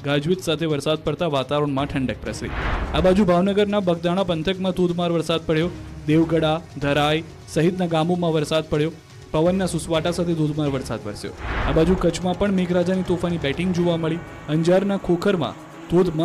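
Nothing technically wrong turns up anywhere in this recording, so there are no times or causes to point to here.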